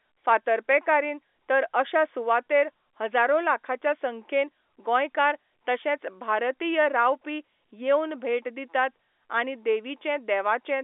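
Telephone-line speech, with no technical faults heard.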